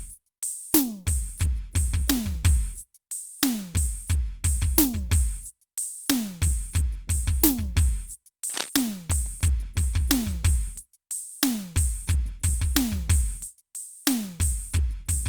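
At 8.49 s the music picks up a quick burst of scratchy, rustling noise lasting about 0.2 s, sitting only about 10 dB under the music. That's cable scratch noise, likely from a worn lead or connector being shifted so its contact resistance jumped around.

Right after, from 9.12 to 9.84 s, come CD scratch ticks: six little clicks, roughly eight a second, none longer than a few milliseconds. A disc blemish wiped out more data per turn than error correction could rebuild, so the player patched or muted those samples.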